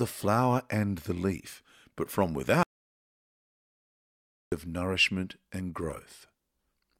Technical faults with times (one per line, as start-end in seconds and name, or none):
2.63-4.52 audio dropout to silence